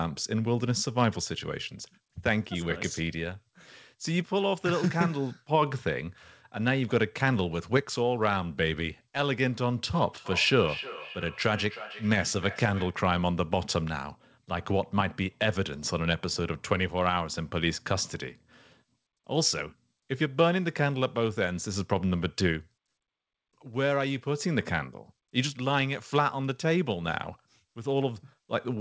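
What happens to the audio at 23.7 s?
Nothing goes wrong at 23.7 s: the speech carries on intact through that moment, with only the ordinary band limit of the call path, which leaves nothing above 8 kHz.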